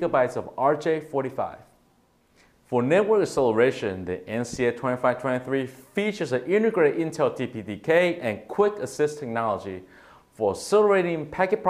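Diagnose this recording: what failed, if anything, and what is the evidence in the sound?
Nothing failed; no fault can be heard anywhere.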